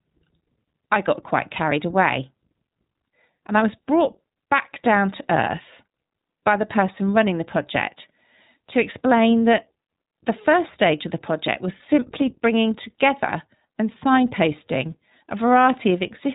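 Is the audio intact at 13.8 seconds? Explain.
No. At 13.8 s, as throughout, the speech sounds muffled, rough and slightly synthetic, with nothing above 3.8 kHz, the mark of the iLBC codec coding each 20 ms frame independently.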